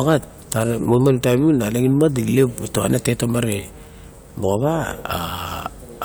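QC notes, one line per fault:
0.92–1.06 s, hard clipping: a stage in the chain was overdriven by about 2 dB, so the loudest peaks exceeded what it could pass and were cut flat. Those squared-off tops add high harmonics, heard as a brief crackle on the speech peaks.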